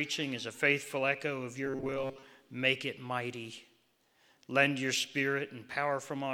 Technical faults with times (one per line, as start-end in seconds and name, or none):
1.66-2.25 robotic sound from repeated short buffers